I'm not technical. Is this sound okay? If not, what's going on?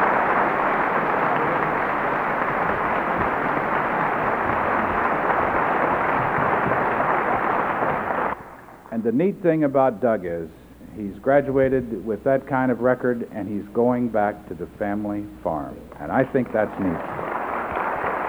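Yes, this sound is okay; nothing is going wrong with it.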